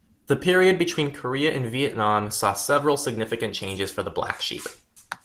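Nothing in this speech recording stood out as a problem on listening.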